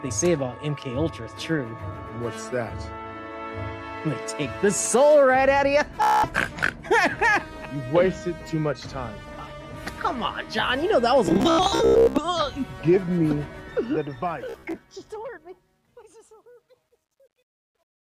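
Bluetooth stutter at 6.02 to 6.27 s: packets arrived late or not at all, so the receiver kept replaying its last short slice of audio, giving about 0.21 s of rapid machine-gun repetition before the sound picks up further along, as though it had kept playing.

Bluetooth stutter returns from 11.26 to 12.25 s, with about 0.62 s of gaps filled by repeated slices scattered across roughly 0.9 s. The longest continuous run, about 0.11 s, becomes a short buzz.

Truncation distortion on a fade begins at 13.54 s, where the fade-out starts around 13.5 s and runs to the end at 18.1 s. The gain stage rounds to too few bits without dither, which fits an 11-bit path. From 15.46 s onward the waveform collapses into coarse steps, so the quiet tail turns gritty. A third Bluetooth stutter falls inside this fade, from 14.49 to 14.78 s, where about 0.14 s of repeated slices over roughly 0.27 s produce brief stuttering bursts up to about 0.05 s long.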